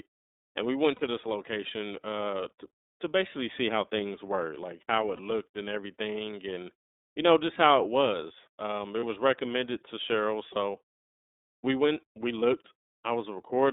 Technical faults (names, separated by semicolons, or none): iLBC codec; lost iLBC frames